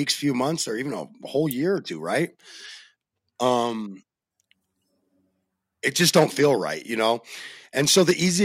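Listening closely to the recorded speech, nothing stood out as a technical problem at any point.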